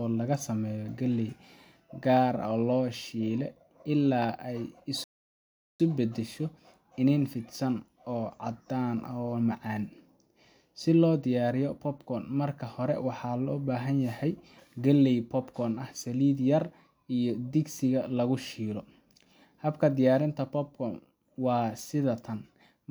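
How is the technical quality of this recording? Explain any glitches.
There's one glitch to flag: a rebuffering stall at 5.04 s. The speech cuts to silence until 5.80 s, adding about 0.76 s. The player simply ran out of downloaded audio and waited for more, so it picks up exactly where it stopped, with nothing skipped.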